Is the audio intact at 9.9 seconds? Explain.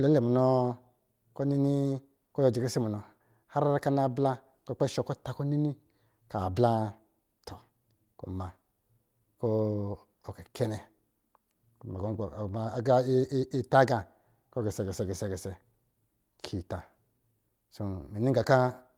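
Yes, the speech at 9.9 seconds plays through intact, with no dropout, click, distortion or other fault at that moment.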